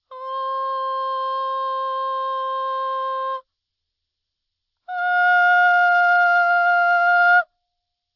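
Aliasing runs through the whole music clip. The top of the spectrum is packed right up to a hard edge at 6 kHz, which fits a downsample from 48 kHz to 12 kHz with no anti-aliasing filter. Content above 6 kHz has folded back below that edge onto unrelated frequencies, roughly 35 dB under the music. Bright sounds come across as gritty and metallic.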